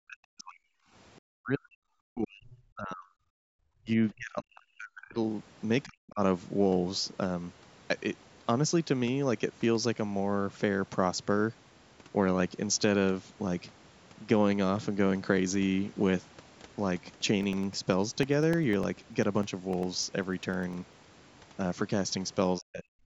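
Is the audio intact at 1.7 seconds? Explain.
No, not at 1.7 seconds. That moment falls inside a stretch of speech suppressed in double talk, running from about 1.31 to 1.86 s. The speech drops sharply, roughly 40 dB at its deepest, for about half a second in total. The likely cause is an echo canceller mistaking the near talker for loudspeaker echo while the far side was talking, and turning both down together.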